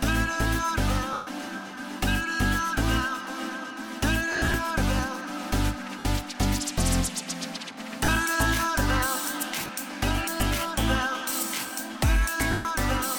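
Lost LE Audio frames cut in at 1.13–1.27, 4.32–4.54, 5.99–6.05, 8.05–8.08, 9.59–9.69 and 12.51–12.65 s. The LC3 decoder repeats the last spectrum with random signs, smearing tones into noise. The 140 ms gaps at 1.1 and 12.5 s fade toward silence, while the 4.3 and 9.6 s losses come as scattered short dropouts.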